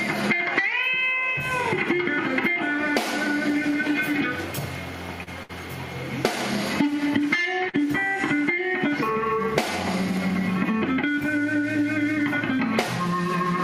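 Short stalls from a late packet occur three times, at 5.23 to 5.29 s, 5.43 to 5.51 s and 7.69 to 7.76 s. Each time a packet arrived after its playout deadline, the jitter buffer emptied, and the receiver held the last sound for 33, 64 and 44 ms before resuming exactly where it stopped. Nothing is lost, but the audio briefly freezes into a sustained, faintly buzzy tone, and playback ends up running that much later.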